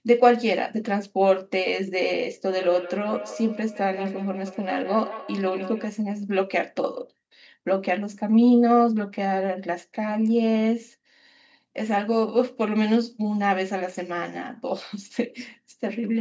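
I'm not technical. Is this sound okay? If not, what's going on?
No. From 2.53 to 5.94 seconds, each bit of speech comes back as a quieter, thinner, ringing copy, repeating about every 150 milliseconds. This is feedback echo between two devices: two devices in the same room joined the same call, one played the other's sound aloud, and that microphone caught it again. Each device's echo canceller only removes its own playback, so the copy slipped through.

At 10.81 seconds there's a single sharp tick, like a tiny click that has nothing to do with the speech around it. This is a bit error spike: one digital value in the audio got flipped, probably in memory or while being passed between devices, making the waveform jump for an instant and snap straight back. The tick is so brief that it points to just one corrupted sample.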